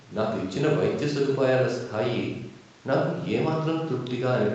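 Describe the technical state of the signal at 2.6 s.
At 2.6 s the speech is intact, with no dropout, glitch or distortion, only the normal narrowing of a call path that leaves nothing above about 8 kHz.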